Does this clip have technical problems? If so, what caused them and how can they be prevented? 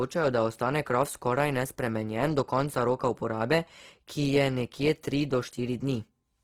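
Yes. The whole speech clip carries Opus compression artefacts, and they're plainly audible: the sound turns grainy and rough rather than swirly, with a noisy, hissy texture where finer detail should be. It's likely from Opus running in its music (CELT) mode at a low bitrate, around 16 kbps. The encoder keeps each band's energy but fills starved bands with noise or folded copies of lower ones. To prevent it, encode at a higher bitrate or keep an uncompressed master.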